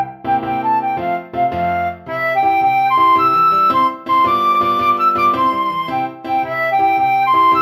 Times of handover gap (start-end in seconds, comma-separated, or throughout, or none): none